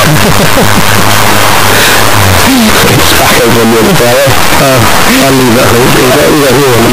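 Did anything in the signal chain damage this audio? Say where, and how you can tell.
Yes: signed and unsigned mixed up, throughout. The constant harsh, full-loudness distortion, quiet passages included, likely comes from sample-format conversion misreading the 8-bit samples' top bit.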